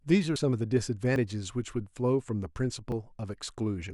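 At 0.36 s the speech jumps forward. Roughly 40 ms of sound is missing, and the two sides are butted together with no gap. The same thing happens at 1.16 s and 2.92 s, each time losing about 20 ms. This is likely a dropped buffer (overrun). The recording software fell behind, the hardware overwrote audio it had not yet collected, and the stream skipped ahead.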